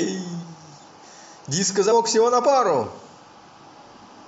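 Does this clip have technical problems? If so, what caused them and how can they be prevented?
Yes. At 1.91 s the speech jumps ahead: compressed frames were skipped, about three 23.2 ms frames, roughly 70 ms of audio. Unlike a dropout, there is no silent gap. Checksummed storage and error-checked transfer prevent damaged frames.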